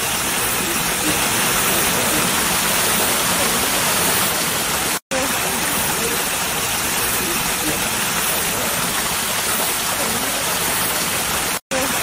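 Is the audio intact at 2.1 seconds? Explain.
No. From 1.07 to 4.29 s there is a doubled audio track. A second full-band copy trails about a second behind, roughly 5 dB quieter, with no decay or room colour. It likely comes from a slower capture path mixed back in.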